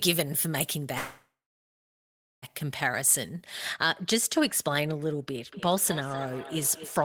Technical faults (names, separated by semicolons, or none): pre-emphasis left on; call audio freeze; feedback echo between two devices